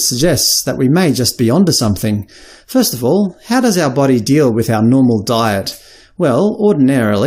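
Listening closely, nothing in the audio stood out as a technical problem at any point.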